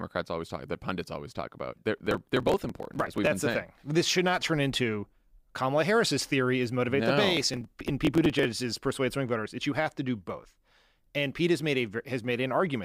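From 1.98 to 3.27 s, after "always talk about they're", the speech breaks into processor overload crackle. The processor misses many buffer deadlines in a row. The sound points to very short buffers, around a millisecond or two. Each missed one is skipped, leaving a hard-edged gap. Dozens of these gaps merge into gritty tearing until "the saying thing this". It returns from 7.37 to 8.45 s, after "is motivate no the", and stops before "is persuade swing voters".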